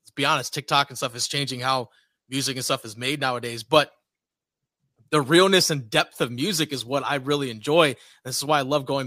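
No technical faults are audible.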